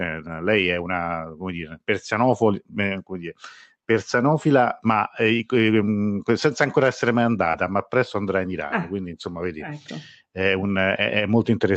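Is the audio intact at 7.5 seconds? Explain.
No. From 7.51 to 7.56 s, between "senza ancora essere mai" and "ma presto andrà in", short concealed packet loss occurs: about 20 ms never arrived, and the decoder extended the preceding sound to fill it, leaving a brief smear.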